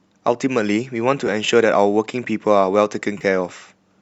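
AAC frame loss with concealment occurs at 1.27 s and again from 3.18 to 3.23 s. The decoder patched missing spectrum from the last good frame. The brief first gap sounds smeared and noisy. The 30 ms second gap, consistent with three lost frames, sounds phasey.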